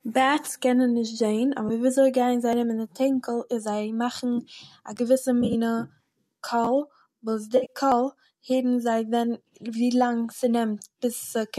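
Just after "בעט'ס קענען נישט זעהן", at 1.69 s, a 10 ms AAC frame loss with concealment leaves a brief smeared patch where the decoder rebuilt the missing frame from the last good spectrum. At 2.53 s a jump forward of about 40 ms comes, likely a dropped buffer from an overrun, joining the sound directly across the gap. From 4.96 to 4.98 s a 10.67 ms chunk plays one chunk late, so the chunks are out of order and the sound jumbles briefly. Between 5.42 and 5.55 s, 60 ms of AAC frames are lost across 120 ms, with runs of up to roughly 30 ms filled by concealment and heard as noisy, phasey smearing. A second out-of-order chunk, again 10.67 ms and one chunk late, produces a garble from 6.65 to 6.67 s. From 7.57 to 7.73 s, 100 ms of frames are lost over 120 ms, with runs of up to about 50 ms, giving a longer noisy, smeared patch. At 7.92 s another skip of about 40 ms matches a second dropped buffer.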